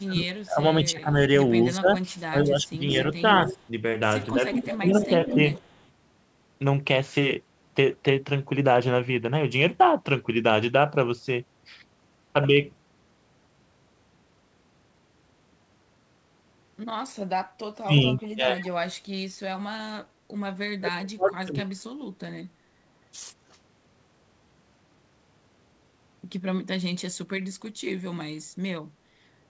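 From 0.0 to 5.38 s, the speech is suppressed in double talk. It dips by up to about 20 dB, for roughly two seconds in all. An echo canceller likely turned it down while both sides talked.

At 0.40 to 0.44 s, a faint echo leak appears, about 40 dB below the speech. It is delayed 164 ms. A likely cause is incomplete echo cancellation at a loudspeaker end.

From 2.9 to 5.85 s, a strong echo leak follows, only about 10 dB down. It is delayed 187 ms. It is likely the same uncancelled loudspeaker pickup.

From 17.8 to 18.65 s, the speech is suppressed in double talk again. It drops by up to about 25 dB, likely from the canceller ducking both talkers.

From 17.99 to 18.69 s, an echo leak overlaps this, about 25 dB down and delayed 161 ms. It is likely residual loudspeaker echo.

From 20.76 to 22.17 s, the deepest double-talk suppression occurs. The speech drops by up to about 35 dB for roughly a second and a half. 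The likely cause is the canceller clamping down during overlap.

At 23.51 to 23.57 s, a brief echo leak appears, about 40 dB down and delayed 195 ms. It is likely a scrap of uncancelled echo.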